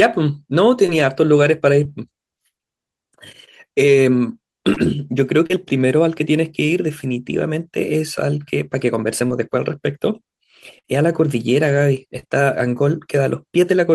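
Short concealed packet loss appears at 0.86 to 0.95 s, 1.84 to 1.86 s, 4.74 to 4.77 s, 5.46 to 5.51 s, 9.27 to 9.31 s and 12.19 to 12.26 s. Each time, 10 to 30 ms of audio arrived too late, and the receiver extended the preceding sound before blending back. The result is a brief smear or wobble in the speech.

A burst of packet loss at 10.79 to 10.85 s drops about 60 ms in a row. Concealment holds the last sound as a fading buzz or hiss, and the speech then resumes with that stretch missing.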